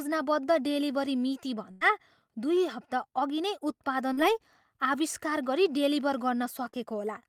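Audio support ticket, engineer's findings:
Burst of packet loss, 1.71 to 1.83 s. Last sound held and decaying for about 94 ms, then audio resumes with about 100 ms absent. Probable component: network path / receiver jitter buffer; decoder concealment extending a lost run. Unlike the short drops, this is long enough to become an audible held sound that fades, with a clear skip forward afterwards.

Short concealed packet loss, 4.13 to 4.19 s, just after "अघि नै", and 6.69 to 6.75 s, just after "आविष्कार गरी डेलिभर". About 40 ms lost each time, with about 43 ms and 39 ms synthesized from the preceding sound and blended back. Probable component: network / decoder PLC. Distinguishing mark: a brief smear or wobble, no sustained fade, no obvious jump.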